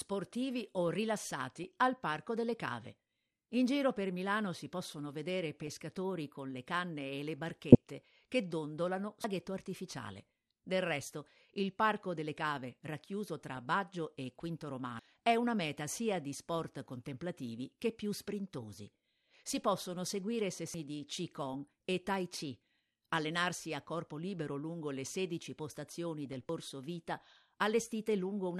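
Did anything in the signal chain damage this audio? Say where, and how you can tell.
Yes, at three stages.

Codec stage: throughout the clip the speech is dull, with a gurgling, granular texture as upper bands flicker in and out. This points to MP2 compression, likely at a low rate around 80 kbps, where Layer II starves its 32 sub-bands of bits and shuts the top ones off. Unlike the bursts below, this damage never lets up. It is a constant coarseness across the whole recording.

Transmission stage: short garbled bursts appear at 1.64–1.68 s, 7.72–7.75 s, 13.55–13.65 s and 26.26–26.33 s. This is DAB burbling. A small fraction of a percent of bit errors slipped past error correction and corrupted the audio data, putting short blips of noise into single sub-bands. These bursts are isolated, unlike the steady codec dullness, and nothing goes missing. The sound is garbled, not cut.

Recording or processing stage: three abrupt skips occur at 9.24 s (just after "che dondolano"), 14.99 s (just before "è una meta sia") and 20.74 s (just after "possono seguire"). 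Each one loses about 300 ms, and the two sides are butted together with no silence between them. The spacing is regular, about every 5.75 seconds. That points to audio missing between chunks, with chunk handover the likely cause. A random network dropout would not fall on such an even interval.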